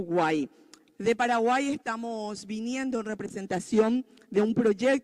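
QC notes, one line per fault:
Throughout: clock drift between sender and receiver. The sending clock runs roughly 4 percent slow against the receiving one, so audio arrives a little more slowly than it is played out and the jitter buffer keeps draining. To avoid running dry, the receiver has to keep padding the stream, which leaves the timing of the whole clip faintly unsteady rather than clean at any single point, with small irregular hiccups recurring instead of one obvious break.
0.37 to 4.93 s: repeated timing corrections. Across this stretch the receiver keeps repeating short slices of audio to make up for the slow sender, all in the same direction and at uneven spacing, so the sound plays out at about 96 percent of its proper speed. In total roughly a fifth of a second is added. Each individual repeat is small, so the effect comes across as slight stutters and a faintly dragging, uneven tempo rather than clear glitches.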